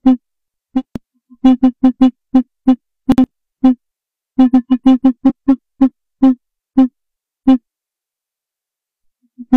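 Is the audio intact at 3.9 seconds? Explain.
Yes, the audio is intact at 3.9 seconds, with no dropout, click, distortion or other technical fault at that point.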